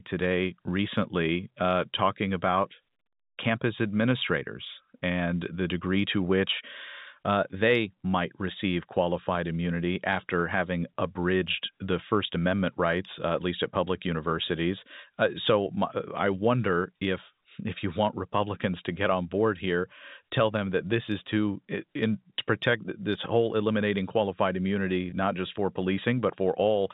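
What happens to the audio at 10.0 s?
Nothing goes wrong at 10.0 s; the speech passes through intact, carried by the usual narrowband telephone coding.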